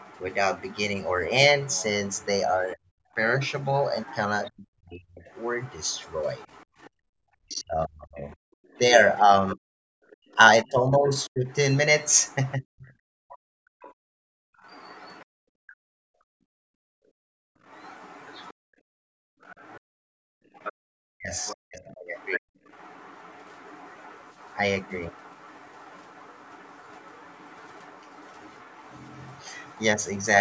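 From 0.0 to 15.26 s, and again from 17.64 to 30.26 s, the echo canceller likely failed to strip the loudspeaker signal from the microphone, so the other side's voice leaks through faintly, around 25 dB below the talker. Because both sides were talking at once, the canceller likely could not separate the near talker from the echo and turned everything down. This speech suppressed in double talk appears from 2.75 to 5.22 s, 7.36 to 13.33 s and 20.52 to 22.5 s. The talker's speech dips by as much as roughly 40 dB for about a second, then about three seconds, then about a second. When the loudspeaker played, the canceller clamped the microphone hard. This gating of the background by the echo canceller hits 6.66 to 7.08 s and 13.61 to 20.24 s, with room sound dropping out by about 34 and 35 dB for brief and then longer stretches.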